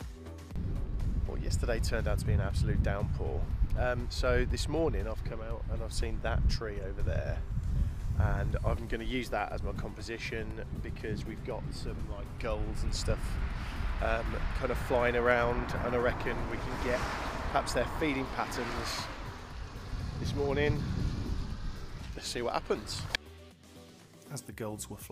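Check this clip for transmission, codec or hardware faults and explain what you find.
No faults can be heard anywhere in this recording.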